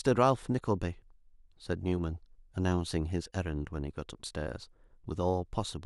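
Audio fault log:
No faults are audible in this speech recording.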